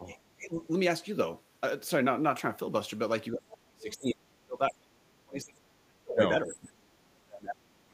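Right from the start, at 0–0.16 s and again at 0.34–0.59 s, the speech dips in short bites, the second one a fair bit deeper. That's speech suppressed in double talk, likely the echo canceller turning everything down while both ends talked. It gets much heavier from 3.33 to 6.21 s, where the talker drops by around 35 dB and nearly vanishes, and it comes back at 6.52–6.97 s and from 7.13 s to the end. Partway through that long stretch, at 3.9–4.14 s, there's a faint scrap of the other side's voice leaking through, about 20 dB under the speech, likely loudspeaker echo the canceller didn't fully remove.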